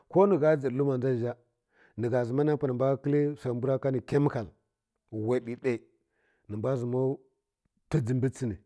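Nothing technical goes wrong anywhere in the recording; there's simply no fault to point to at any moment.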